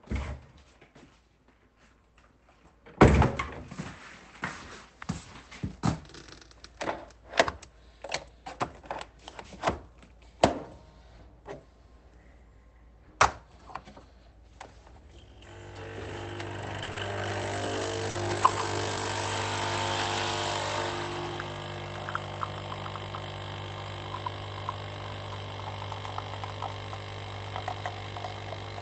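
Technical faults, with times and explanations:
16.83–18.52 s, scattered short gaps: about three brief dropouts, the longest around 40 ms, each patched by stretching the preceding sound, leaving small ticks and smears.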